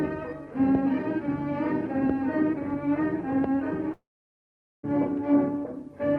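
From 3.93 to 4.85 s the audio stops for about 0.9 s, most likely a long network dropout. The last sound carries on briefly as a fading buzz or hiss, then roughly 0.8 s of silence follows before the audio resumes further along, with that stretch simply gone. The smeared tail and the long gap separate it from a short packet-loss glitch, which is patched over almost seamlessly, and from a hard edit cut, which has no decaying fill.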